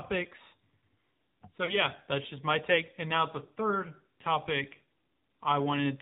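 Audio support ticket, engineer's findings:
AMR narrowband mobile codec, whole clip: speech band-limited, nothing above 4 kHz, buzzy and synthetic timbre, codec damage plainly audible. Probable component: mobile voice path, AMR-NB encoder. Mechanism: 8 kHz sampling plus vocal-tract model excited by sparse pulses per 5 ms subframe; the degree of buzz fits a low mode around 7.4 kbps. Sibilants dull, voice thin.

Lost AMR speech frames, two events: brief dip or warble at 1.66–1.78 s, shorter one at 3.46–3.50 s. Probable component: radio link, AMR decoder concealment. Mechanism: one 20 ms frame failed its checksum each time; decoder repeated last good pitch and vocal-tract settings at reduced gain, then recovered with the voice briefly weak or rough.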